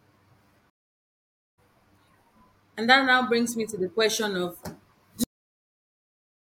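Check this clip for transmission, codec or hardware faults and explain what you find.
Two faults stand out in this speech clip.

From 0.70 to 1.58 s there's a stream reconnect. The connection dropped, leaving about 0.88 s of silence, and the restarted decoder picks up roughly a second further into the speech.

At 5.24 s there's a cut-off end. The final buffers never got played, so the speech stops abruptly mid-sound and drops straight into digital silence with no natural decay.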